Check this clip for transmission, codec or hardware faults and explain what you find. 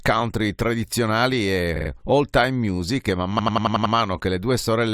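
Two stretches of repeated frames make the speech stutter. At 1.75–1.89 s, after "country tradizionali", a 46.4 ms block plays three extra times. At 3.38–3.94 s, after "music e man", a 92.9 ms block, four frames' worth, repeats six times, adding about 0.56 s. A run of compressed frames was sent again, so the decoder replays it. On a spectrogram and waveform, identical slices repeat side by side.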